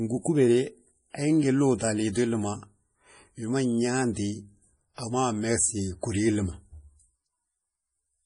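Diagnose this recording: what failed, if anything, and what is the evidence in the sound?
Throughout the speech, the sound is watery and swirly, with chirpy, smeared sibilants and nothing above 10.5 kHz. At the codec stage, this is likely heavy MP3 compression: starved of bits, which fits a low rate near 32 kbps, the encoder cuts the treble and drops weak spectral lines frame by frame.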